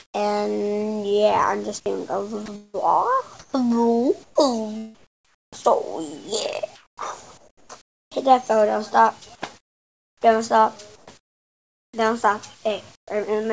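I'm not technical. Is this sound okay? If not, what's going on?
No, not quite. There are two related problems.

The first is comfort noise in place of the background. In the pauses, the real background gets swapped for a smooth, featureless hiss. That's likely because the sending end stopped transmitting when it heard nothing worth sending, so the receiving end filled the gap with made-up noise. It happens right at the very start (0 to 0.14 s), from 6.76 to 8.11 s, from 9.58 to 11.93 s, and briefly at 12.95 s. That last one drops noticeably quieter.

The second is sound chopped by the voice detector, between 2.46 and 5.84 s. Here the sender likely kept flipping between sending and not sending, so about a second's worth of quieter bits got replaced by that fake hiss. It sounds choppy. Separately, the call link itself caps the top end at around 8 kHz, so there's no real sparkle up high.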